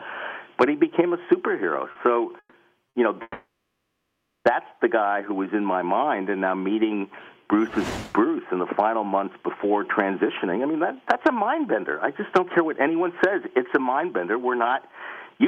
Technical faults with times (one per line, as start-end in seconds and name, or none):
1.91-1.98 short stall from a late packet
2.39-2.56 call audio freeze
2.89-2.97 short stall from a late packet
3.22-4.48 call audio freeze
10.23-11.88 jitter buffer speed-up
12.42-15.47 jitter buffer speed-up